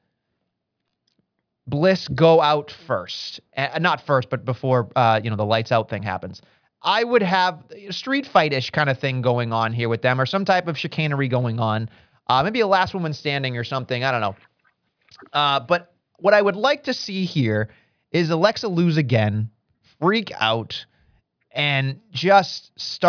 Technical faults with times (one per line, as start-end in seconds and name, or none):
none